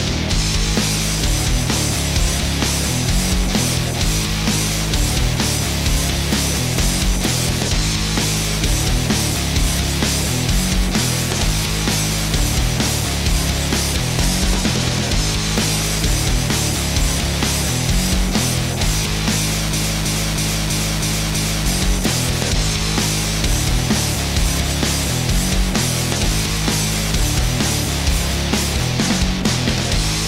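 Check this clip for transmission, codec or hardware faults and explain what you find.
One fault is present: a broken-record loop from 19.73 to 21.66 s. A 0.32 s fragment repeats exactly six times back to back, replacing the audio that belonged there, most likely because the stream stalled and kept resending its last piece. The waveform shows one identical shape tiled repeatedly, and the spectrogram shows the same block stamped side by side.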